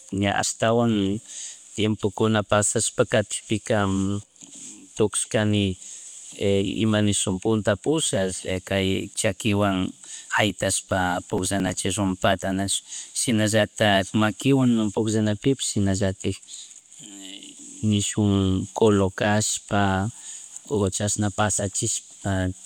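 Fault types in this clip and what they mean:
Processor overload crackle: missed deadlines skip roughly ten buffers of about 3 ms, giving gritty tearing; the waveform shows hard-edged gaps and the spectrogram shows thin vertical broadband streaks.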